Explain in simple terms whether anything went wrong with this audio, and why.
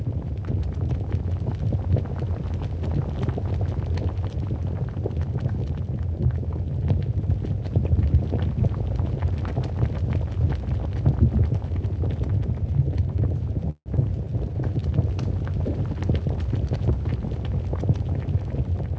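Around 13.70 s the sound stalls into a brief fading buzz, including about 70 ms of silence, for roughly 0.18 s. This call audio freeze was likely caused by delayed network packets leaving the receiver nothing new to play.

At about 13.96 to 13.99 s playback jumps forward in a skip ahead. Roughly a fraction of a tenth of a second of sound is lost, and the two sides are joined almost directly.

From 14.16 to 14.81 s the sound drags, running at 91% speed at unchanged pitch. This jitter buffer slow-down stretched it by 68 ms to rebuild a reserve of audio.

From 15.74 to 17.89 s it runs hurried, at 107% speed. This jitter buffer speed-up trimmed around 150 ms to cut an excess delay.

All of this happened on a call connection, which also limits the sound to nothing above 8 kHz.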